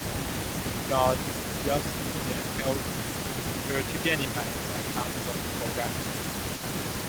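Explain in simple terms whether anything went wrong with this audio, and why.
A faint, delayed copy of the speech trails about half a second behind it throughout, clearly quieter than the original. This is echo leak, likely a speakerphone whose echo canceller let some sound through.

The speech also dips briefly from 0.0 to 0.36 s, 0.86 to 0.93 s, 2.09 to 2.8 s and 3.66 to 5.97 s. This is speech suppressed in double talk, likely the canceller turning down this side's voice along with the echo while both sides talked.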